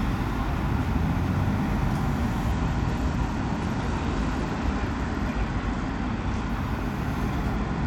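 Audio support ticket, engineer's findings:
Treble dulls, gritty noise rises, 2.52 to 6.49 s and again 7.56 s to end. Bluetooth SBC bit pool drop on a congested link. Top sub-bands starved, rest coarsely quantised. Fits bit pool falling 31 to 12, near 88 kbps.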